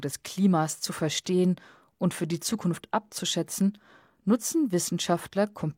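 No technical faults are audible.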